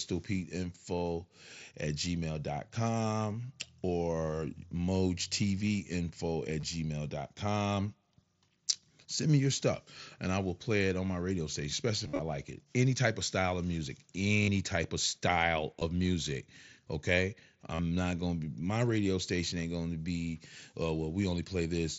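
Short buzzy patches, held at full level and ending in a slight warble, occur at 6.60–6.63 s, 12.04–12.19 s (scattered gaps), 14.43–14.48 s after "of style of music", 15.79–15.82 s after "type of style", and 17.75–17.79 s before "not going to be". This is concealed Bluetooth headset packet loss. The phone filled each missing stretch by repeating about the last 20 ms of waveform.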